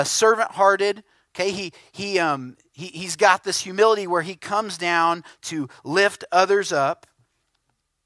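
No technical faults can be heard anywhere in the speech.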